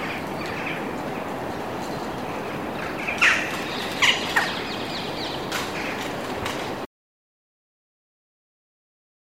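Audio missing between chunks, at 5.52 s: the sound skips forward with no gap, losing roughly 50 ms. This is likely a recorder working in 3-second chunks that dropped a sliver while closing one block and opening the next, then butted the two sides together.

Audio dropout to silence, from 6.86 s to the end: the sound cuts off abruptly to silence, with no room tone beneath it. The input was probably lost, through a disconnection, failed link or mute, while the recorder kept writing silence.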